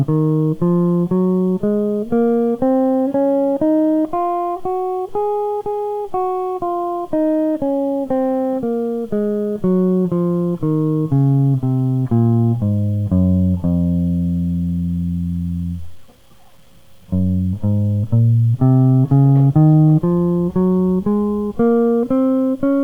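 From start to finish, the music carries a grainy distortion that moves with the signal. Quiet passages turn gritty. The likely cause is low bit depth without dither. The sound fits 9-bit truncation, with error noise roughly 40 dB under the music.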